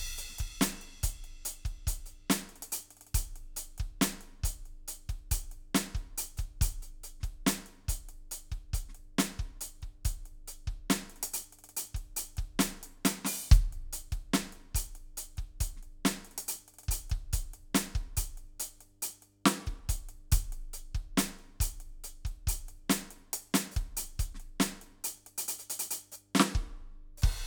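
A music recording carrying mains hum from start to finish: a steady low tone at 50 Hz sits under the whole piece, roughly 35 dB below the music. It comes from the power line leaking into the signal, through a ground loop or a nearby transformer. On a spectrogram it shows as an unbroken horizontal line at 50 Hz across the full width, and on a zoomed waveform as a slow, regular ripple in the quietest stretches.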